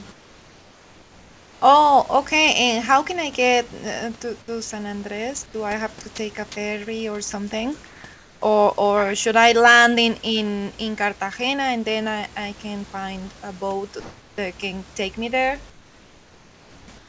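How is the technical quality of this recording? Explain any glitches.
The speech comes through clearly, with the room noise sitting about 29 dB below it and nothing above 8 kHz, as you'd expect from a G.722 call path. But the pauses have a recurring problem, plus one tiny clipped moment.

Comfort noise in place of the background shows up at 0.12–1.62, 5.46–5.54, 7.86–8.04, 8.14–8.42, 14.00–14.38, 15.70–16.88 and 16.98–17.08 s. In each gap the real room sound, roughly 26–30 dB under the loud parts, gets swapped for a smooth, featureless hiss, usually about 3–4 dB quieter, and about 1 dB louder at 14.0 s. That's likely discontinuous transmission: the sender goes quiet when it hears no speech, and the far end synthesises noise to fill the hole.

Sound dropped by the voice detector happens at 6.16 s. For about 20 ms the audio turns into that same steady fill noise, and roughly 10 ms of actual speech goes missing. 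The detector likely misjudged a bit of sound as background, stopped sending, and the receiver patched in generated noise until the signal picked back up.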